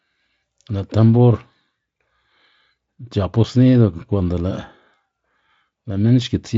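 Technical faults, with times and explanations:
No technical faults can be heard in this speech clip.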